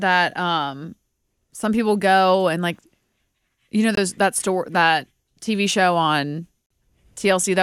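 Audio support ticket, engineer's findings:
Speech cuts to silence at 3.95–3.97 s and 6.68–6.71 s, then resumes further along. About 21 ms and 43 ms of audio skipped, consistent with one and two lost packets. Likely Bluetooth dropout from packets arriving late to the headphones.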